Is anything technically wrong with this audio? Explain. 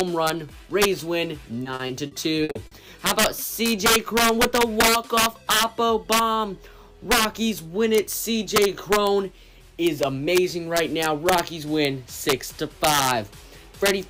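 Yes, two faults are audible.

Integer overflow runs through the whole clip. The signal is driven about 5 dB past the integer limit. Around one percent of samples wrap to the opposite sign instead of being held. Each loud peak becomes a violent crack, far harsher than clipping.

Repeated packet loss, with a robotic sound, occurs from 1.63 to 2.73 s. Packets keep going missing. Each hole is patched by extending the previous sound. About a quarter of that stretch, 260 ms in total, is filled this way. The longest gap is 60 ms. The result is choppy, with pieces missing.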